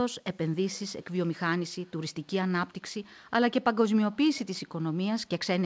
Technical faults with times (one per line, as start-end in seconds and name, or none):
0.54-0.81 echo leak
1.67-2.27 echo leak
3.25-3.31 echo leak
4.66-4.76 echo leak
5.22-5.29 echo leak